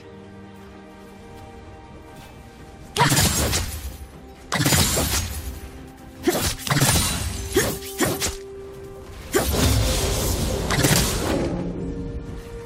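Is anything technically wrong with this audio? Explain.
Yes. At 3.26 s and 7.09 s there is damaged data in the compressed stream: corrupted bytes make the decoder misread those frames and resynchronise on the next frame header, so each spot is heard as a brief blip lasting under 20 ms.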